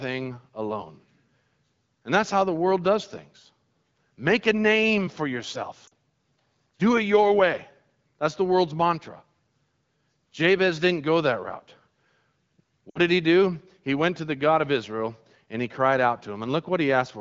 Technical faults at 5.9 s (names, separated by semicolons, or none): lost AMR speech frames